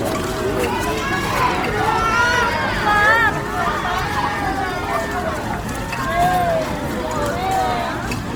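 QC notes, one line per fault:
Throughout: Opus compression, likely. Tones sound rough, grainy and noisy rather than clean. There is little swirling and no obvious holes in the spectrum. That fits the music-style CELT mode, which keeps each band's energy and fills starved bands with folded or noise content. The damage is plainly audible, which points to a low bitrate around 24 kbps. Bandwidth stays full, with content reaching about 20.3 kHz.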